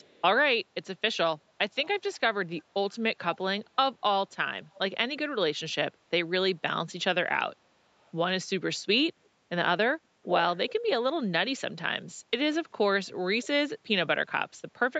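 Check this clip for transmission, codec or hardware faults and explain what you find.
There is an echo leak at 0.0–0.22, 1.85–2.19, 2.57–2.99, 4.72–4.79, 8.01–8.12, 10.24–10.73 and 13.43–13.47 s. The likely cause is a far-end loudspeaker whose echo canceller let part of the speech back into its microphone. That returns a copy delayed by 390 ms. Most scraps sit faint beneath the speech, but at 10.24–10.73 s the echo comes close to the speech's own level. All of it stays within the call's 8 kHz band.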